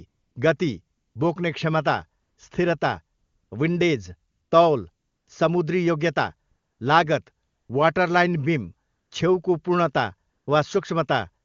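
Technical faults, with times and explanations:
0.07 to 10.47 s, AMR comfort noise: ten gaps of 160 to 360 ms. No speech frames were sent, so smooth synthetic noise replaces the real background.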